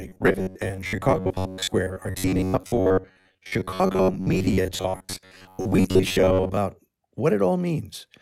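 From 0.01 s to 6.57 s, new audio likely arrives too seldom, so roughly 10.7 ms buffers are replayed over most of the real signal. The result is robotic sound from repeated short buffers: a rigid, metallic 93.8 Hz buzz loosely tracking the speech.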